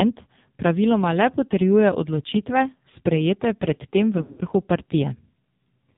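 The whole clip runs through the AMR narrowband mobile codec, and it's hit hard. Everything above 4 kHz is gone, so the speech sounds boxed-in and phone-like. With so few bits describing each 20 ms frame, the vocal-tract model and its handful of pulses can't keep up, and the voice comes out buzzy and synthetic. That degree of damage fits one of the codec's lowest modes, around 5.9 kbps.

Then at about 4.18 s, right after "odločitve sprejete pred tem", you get lost AMR speech frames through to about 4.43 s. The radio link corrupted frames so they failed their checks, and the decoder filled the holes by replaying the last good pitch and filter settings at dropping gain. Roughly 160 ms goes missing, scattered over a 200 ms stretch, with the longest gap 80 ms. So it warbles, smears and sags rather than cutting out cleanly, and the speech is a bit rough as it recovers.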